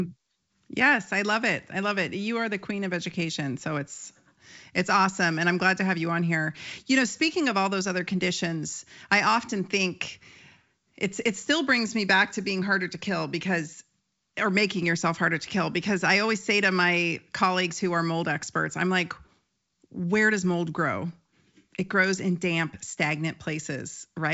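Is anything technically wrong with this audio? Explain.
No, nothing is technically wrong with this audio.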